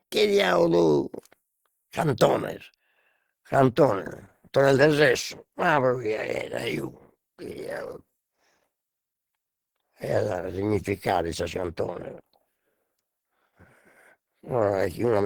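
A speech clip in which, from 2.92 s to the end, the sound abruptly turns coarser, with codec artefacts rising and no gap at the switch: an adaptive stream at a lower bitrate, dropping to a lower-quality version when the connection slowed. The change is consistent with a fall from about 64 to 16 kbit/s Opus. On a spectrogram the upper bands go smeared and blocky from 2.92 s, with no silent column at the switch. The waveform stays continuous throughout.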